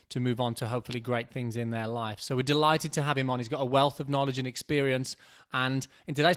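There are no technical faults to describe at any point in the speech.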